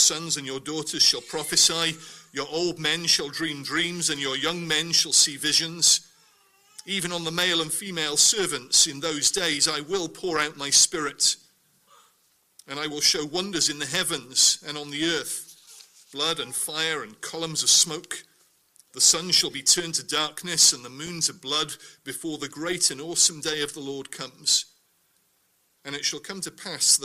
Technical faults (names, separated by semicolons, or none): loose connector crackle